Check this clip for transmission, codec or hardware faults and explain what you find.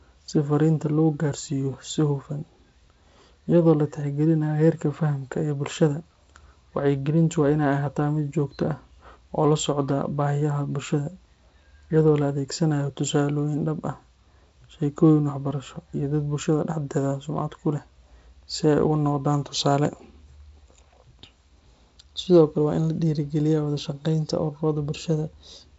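Nothing in the speech points to a fault: it has passed through G.722 wideband telephone coding at a rate that fits 48 kbit/s, so the audio stops at about 7.7 kHz and carries only the light texture this coding leaves behind.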